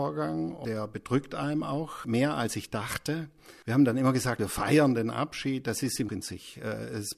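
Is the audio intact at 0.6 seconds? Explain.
No. At about 0.64 s there is damaged data in the compressed stream: corrupted bytes make the decoder misread frames and resync on the next header, producing a brief chirp or blip. A spectrogram shows a thin broadband vertical streak; the waveform shows a discontinuity.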